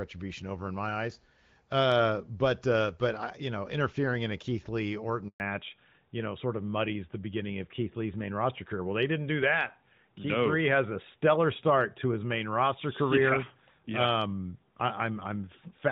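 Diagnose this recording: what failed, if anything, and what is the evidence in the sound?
At the network stage, a handover gap opens from 5.28 to 5.40 s. The sound fades within a few tens of milliseconds, then 120 ms of silence follows while the link switches and no frames arrive. On a waveform this is a flat, empty stretch, and on a spectrogram a clean vertical blank band.

Also at the network stage, a fallback to narrowband follows the handover from 5.40 s to the end. Before it, the light HD Voice coding keeps content up to about 7 kHz. Afterwards nothing remains above 4 kHz, and the sound turns duller and rougher. A spectrogram shows the top band cut off abruptly at the switch, which fits a drop to the AMR narrowband codec.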